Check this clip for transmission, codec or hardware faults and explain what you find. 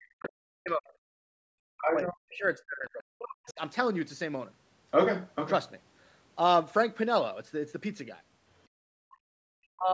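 Two echo-canceller faults recur in this speech clip, both showing up as sudden losses of level rather than noise or distortion. Above them the audio stops at 8 kHz, which fits ordinary call microphone processing.

Speech suppressed in double talk occurs from 0.0 to 0.94 s, 1.65 to 3.6 s, and from 9.73 s to the end. The likely cause is the far side talking at the same moment, so the canceller could not tell the local talker from loudspeaker echo and turned everything down. The voice sinks by roughly 40 dB at its deepest, thinning and breaking into fragments.

Background gated by the echo canceller occurs from 1.22 to 1.37 s and from 8.69 to 9.45 s. With the loudspeaker active, the canceller clamped the microphone hard, pulling the room sound down by about 36 dB in the first instance and about 33 dB in the second. The ambience simply vanishes, briefly in the first case and for most of a second in the second, then returns as the suppression releases.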